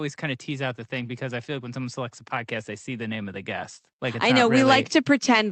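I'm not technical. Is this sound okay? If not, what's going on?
No. There's automatic gain rising twice: from 0.2 to 2.28 s, just before "I see", and again from 2.98 s, after "I see", to the end. Each time, the recording's automatic volume control decides things are too quiet and slowly turns itself up, so the voice and the background swell louder together.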